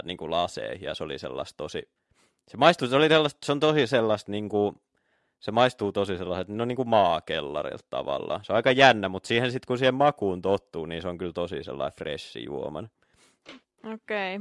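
Nothing technical goes wrong anywhere in this speech recording, so there's no fault to point out.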